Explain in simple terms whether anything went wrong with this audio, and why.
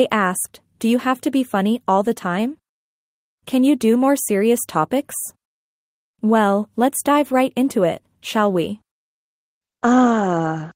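Nothing went wrong here.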